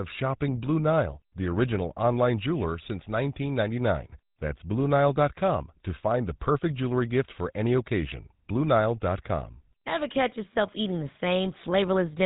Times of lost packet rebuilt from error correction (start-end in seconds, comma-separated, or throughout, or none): none